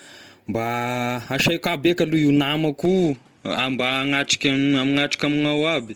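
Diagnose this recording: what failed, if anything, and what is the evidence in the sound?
Codec stage: across the whole recording the speech has a grainy, rough texture on voiced sounds, with noise-like fill where harmonic detail should be, yet few dropouts or swirling holes. The band still extends to about 20.2 kHz, so the encoder kept full bandwidth. This is likely Opus compression in its music (CELT) mode: band energies are preserved while bit-starved bands are filled by folding or noise, at a damage level that fits a rate near 24 kbps.

Capture stage: from 2.85 s to the end the top of the spectrum drops away above about 11.7 kHz, so sibilants and breath lose their air. A faint new background noise appears well below the speech, and the level stays the same, with no gap at the transition. That pattern points to the input switched to a poorer device, likely a change of microphone or headset profile, whose narrower passband and own noise floor replace the original capsule mid-recording.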